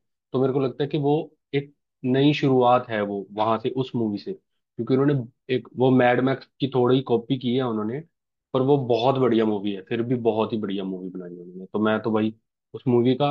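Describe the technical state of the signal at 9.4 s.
At 9.4 s the speech signal is intact, with no dropout, clipping, distortion or other technical fault audible at that moment.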